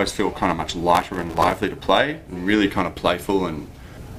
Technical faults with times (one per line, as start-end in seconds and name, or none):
0.95-1.58 processor overload crackle